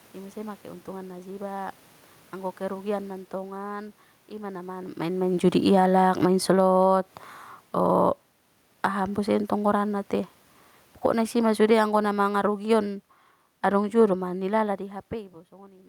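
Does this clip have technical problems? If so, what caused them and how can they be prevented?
Yes. From 5.59 s to 14.78 s there is an automatic gain falling fault. The gain control judged the input too loud, or its background noise too strong, and gradually lowered its gain by about 13 dB, so the speech and the room noise sink together. On a waveform the whole envelope tapers, and on a spectrogram the background fades in step with the voice. This differs from the talker moving around 4.5 s and 14.5 s, which changes only the voice. To prevent it, set a lower input level or switch off automatic gain so it never needs to back off.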